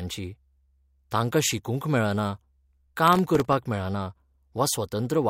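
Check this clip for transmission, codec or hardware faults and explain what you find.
One fault turns up: processor overload crackle, from 3.08 s to 3.53 s in the speech. The processor fell behind on its audio buffers, missing deadline after deadline, and each miss left a brief hole of silence with abrupt edges. The holes are very short, which fits buffers of under a millisecond, with something like fifteen lost across that half-second. The result is a gritty, tearing crackle over the speech rather than one clean dropout, and it stops once the load clears.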